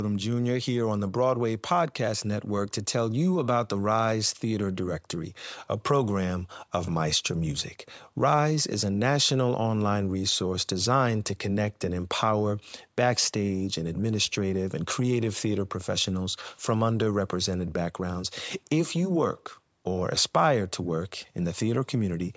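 No technical faults can be heard in this speech recording, which has gone through a call's microphone processing, with the usual high-pass filter trimming the lowest bass and no content above 8 kHz.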